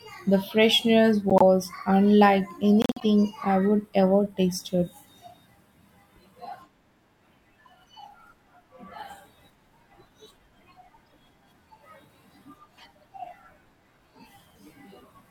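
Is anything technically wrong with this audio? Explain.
Yes. Corrupt frames were decoded at 1.30–1.42 s (after "the freshness"), 2.82–3.04 s (before "I would ever tasted"), 11.07–11.13 s and 13.03 s. Flipped bits scrambled gains and codes across a few frames each, misplacing energy: loud glitches at the first two, faint ones at the last two.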